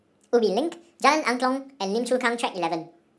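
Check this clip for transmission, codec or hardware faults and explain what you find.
One fault is present, and it runs through the whole clip. From start to finish the speech sounds high, hurried and chipmunk-like, pitched up by about 7 semitones and moving 1.5 times faster than it should. This is a wrong sample rate. The samples are being played back faster than they were captured, with no conversion, so pitch and tempo rise together by the same ratio. That ratio fits speech recorded at 16 kHz and played at 24 kHz.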